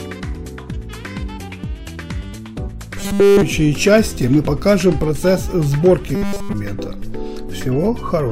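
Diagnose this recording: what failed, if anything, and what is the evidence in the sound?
Robotic sound from repeated short buffers, twice: 3.00 to 3.42 s and 6.15 to 6.53 s. In both stretches the sound collapses into a rigid, metallic buzz at a fixed 200 Hz. That period matches a 5 ms block being replayed over and over, with essentially all of the real audio skipped. The failing stage is likely the driver or buffer, starved of new data. A codec's loss concealment would fade or smear the sound rather than lock it onto one steady pitch.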